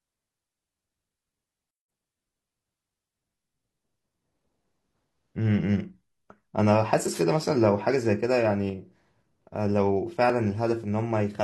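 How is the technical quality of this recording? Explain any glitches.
The speech recording has four distinct glitches.

At 1.71 s the sound cuts out for about 175 ms. This playback stall is likely the player running short of data, and then it resumes.

From 1.88 to 2.06 s, catch-up at higher speed follows. The backlog plays at double speed, so pitch jumps by roughly ten semitones.

Between 7.11 and 7.22 s a wireless microphone noise hit occurs. The radio signal fades, and receiver noise rises into a brief swish of static.

At 10.30 to 10.34 s an overlap between stream segments removes a sliver of audio. The waveform jumps at a join between 4-second segments.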